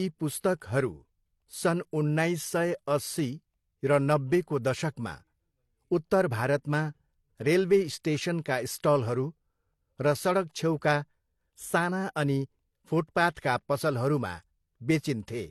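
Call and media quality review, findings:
Layered codec artefacts across the whole speech clip, nothing above 13.5 kHz. Likely transcoding between lossy codecs: AAC-LC artefacts re-encoded by HE-AAC, fitting roughly 48 then 40 kbit/s. Unlike a single codec, two distinct artefact textures stack together.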